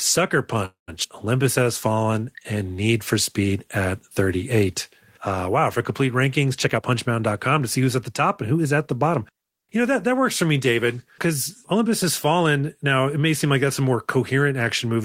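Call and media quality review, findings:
Call audio freeze, 0.65–0.90 s: sound stalls, last segment stretched into a fading buzz or hiss then about 140 ms of silence, roughly 223 ms inserted. Likely packets delayed and jitter buffer ran dry; playback resumes where it stopped, nothing lost.

Skip ahead, 1.04 s: abrupt forward jump, near-zero gap, roughly 70 ms of speech missing, edges spliced almost directly. Jitter buffer or network dropped a stretch while later audio was already queued, cutting delay by about that much.

Jitter buffer slow-down, 1.43–2.20 s: speech plays at 91% speed, pitch unchanged, sounds drawn out. Receiver repeated pitch periods many times over to build reserve after low buffer, adding 78 ms.

Jitter buffer speed-up, 6.65–8.88 s, after "wow for complete rankings", before "the bottom": speech runs at 110% speed, same pitch, hurried. Buffer over target; receiver trimmed short pitch-period chunks repeatedly, removing roughly 200 ms.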